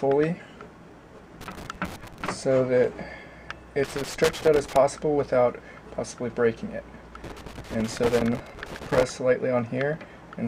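Irregular bursts of crackle and scratching cut into the sound from 1.41 to 2.29 s, from 3.84 to 4.76 s, and from 7.24 to 9.03 s. This is loose connector crackle: a worn or dirty contact keeps making and breaking, which chops the signal.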